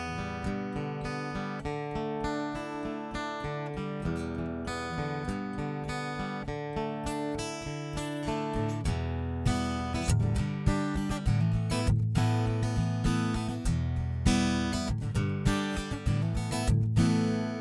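No faults are audible anywhere in the audio.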